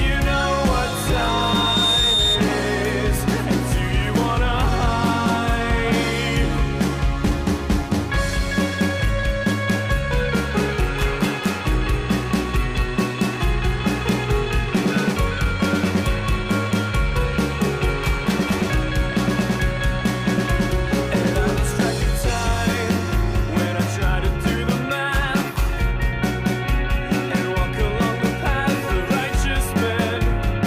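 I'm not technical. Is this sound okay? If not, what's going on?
No. From 0.83 to 2.46 s there's loudspeaker feedback squeal: a microphone is picking up its own speaker. A high 3.7 kHz tone swells over about a second until it's louder than everything else. Unlike a steady electrical whine, it grows by itself.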